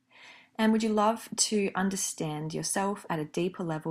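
No technical faults can be heard anywhere in the speech.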